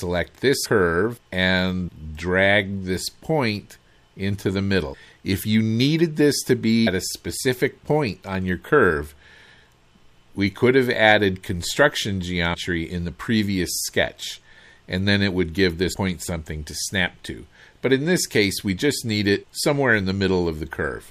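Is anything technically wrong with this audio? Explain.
Yes. At 0.64, 1.87, 4.93, 6.86, 12.53 to 12.55 and 15.92 s the audio lurches forward with a brief smeared blip, as compressed frames skipped drop roughly 100 to 200 ms in 26.1 ms steps.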